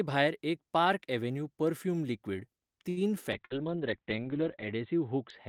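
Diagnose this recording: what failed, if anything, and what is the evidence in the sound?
Network stage, short stall from a late packet. Right after "पार्क अव्हेन्यू पर्फ्यूम लिक्वीड", at 2.89 to 3.00 s, the sound is held too long. It has a faint buzzy sustain. The jitter buffer ran dry while a packet was overdue. The receiver stretched the last sound for 73 ms and then resumed exactly where it left off. Nothing is lost. Playout simply runs 73 ms later from that point on.

Codec stage, driven by call processing: a call bitrate drop. From 3.37 s to the end, the audio turns coarse and muffled. The bandwidth estimate fell, and the Opus encoder went from 32 kbps down to 7 kbps. At that rate the audio band shrinks from 20 kHz to 4 kHz, so the top end disappears. The lowest rate holds for 1.35 s. It does not recover before the clip ends.

Network stage, burst of packet loss. At 3.45 to 3.53 s, just inside the low-bitrate stretch, a run of packets never arrived in time. 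The receiver concealed the gap by continuing the last sound for 54 ms, fading it into a held buzz or hiss. Then it jumped ahead. About 60 ms of the original audio is gone, so the sound resumes further on.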